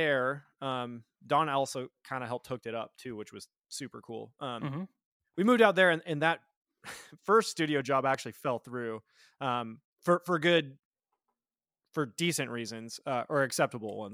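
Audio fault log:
8.14–8.17 s, loud pop: a single sharp pop about 10 dB above the speech, between "first studio job" and "fell through um for", likely a brief voltage spike from a switch or static.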